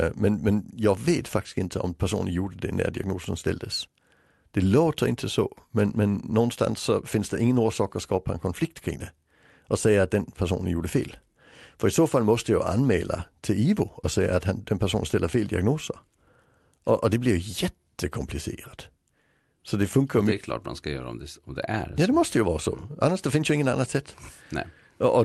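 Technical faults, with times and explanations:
No faults found; the speech carries the ordinary coding texture of a call path, with the top end rolling off near 12 kHz, consistent with Opus.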